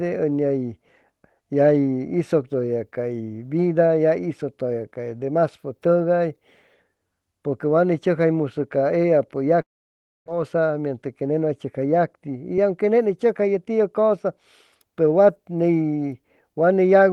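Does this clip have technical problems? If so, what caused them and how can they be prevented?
Yes. From 9.61 to 10.30 s, a long network dropout, likely a stall in packet delivery, left the receiver with nothing to play. It stretched the last sound into a fading buzz, then fell silent, and about 0.4 s of speech never comes back. A more stable connection, or redundancy such as forward error correction, would prevent this.

From 10.38 to 13.71 s, a jitter buffer speed-up follows. Delayed packets arrived in a burst, so the buffer trimmed many short pitch-period pieces, around a fifth of a second in all, to shed the extra delay. Speech runs at 107% speed with unchanged pitch and sounds hurried. A steadier network path, or a buffer set to drain more gradually, would prevent this.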